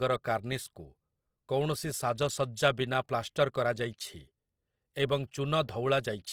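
Throughout, the speech sounds plainly rough and grainy, its tones coated in noise rather than swirling, while the band still reaches about 20.2 kHz. The likely cause is Opus compression in CELT music mode filling starved bands with noise, which fits a bitrate near 24 kbps.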